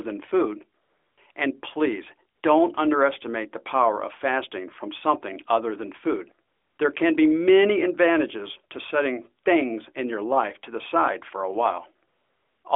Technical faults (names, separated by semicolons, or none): AMR comfort noise